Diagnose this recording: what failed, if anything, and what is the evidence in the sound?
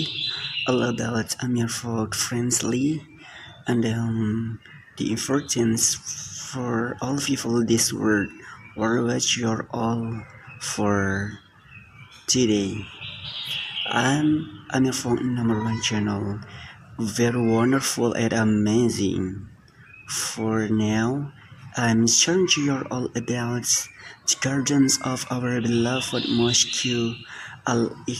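Nothing here points to a failure at any stage of the chain, and I can't hear anything wrong with the recording that would need chasing down.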